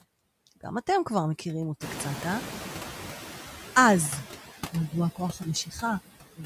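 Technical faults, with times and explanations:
Throughout, noise suppressor artifacts: the suppressor pulls down bands it judges to be steady noise by about 10 dB, frame by frame, so the residual background dips in pauses and swells under the speech.
1.8–3.31 s, noise suppressor catching up: the room noise jumps by about 18 dB at roughly 2 s, and the suppressor's noise estimate trails it. The louder background passes with only about 7 dB of reduction before settling as the estimate adapts over about 1.5 s.
5.15–5.46 s and 5.65–5.83 s, speech cut by the noise suppressor: with the room noise now only about 11 dB below the speech, the suppressor mistakes quieter speech for noise and attenuates it by up to about 14 dB and 12 dB. Around 150 ms in all sounds swallowed or faint.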